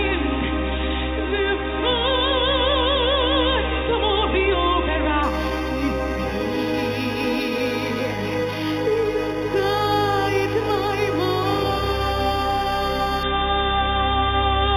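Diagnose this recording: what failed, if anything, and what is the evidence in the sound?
The fault is imaging from linear upsampling, at the sample-rate conversion stage. From 5.23 to 13.23 s the top end dulls and a faint metallic shimmer appears. The rate was raised from 8 kHz to 48 kHz by straight-line interpolation. That left a mirror image at 4 to 8 kHz, roughly 20 dB down.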